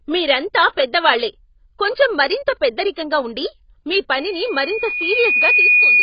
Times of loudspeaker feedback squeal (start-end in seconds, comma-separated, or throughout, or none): 4.17-6.03